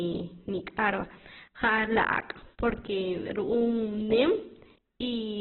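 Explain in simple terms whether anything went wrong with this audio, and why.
The speech was likely squeezed hard by Opus compression at a very low data rate, forcing the encoder to throw detail away. From start to finish nothing above about 4.1 kHz remains, so the voice sounds muffled and telephone-like, with a rough, grainy edge.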